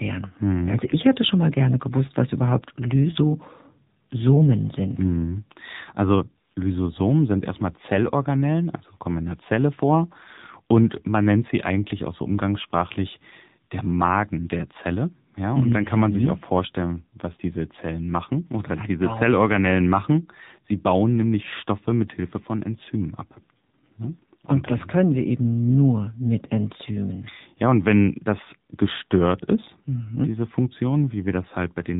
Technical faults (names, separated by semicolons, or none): AMR narrowband mobile codec